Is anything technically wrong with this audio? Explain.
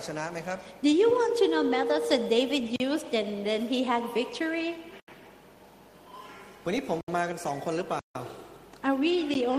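Yes. There are blocks of digital silence at 2.76–2.80 s, 5.00–5.08 s, 7.01–7.08 s, 7.99–8.15 s, and 9.34 s. The audio drops abruptly to silence and then resumes, with no fade. The 13 ms gap at 9.34 s is a tick. The 40 to 160 ms gaps are audible holes.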